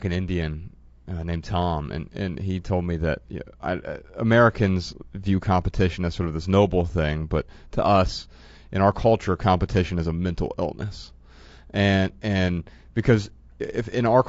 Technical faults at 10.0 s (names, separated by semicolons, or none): low-delay AAC compression